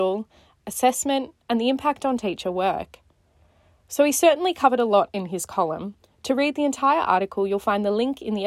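No technical faults are audible at any point in the recording.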